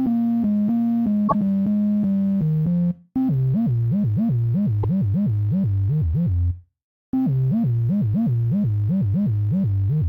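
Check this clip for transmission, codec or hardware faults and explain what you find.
There's one kind of fault here, damaged data in the compressed stream, and it shows up twice: from 1.27 to 1.35 s, and from 4.80 to 4.85 s. Corrupted bytes threw the decoder off its frames until it found the next good header, so each spot comes out as a short, harsh chirp or blip cutting across the sound.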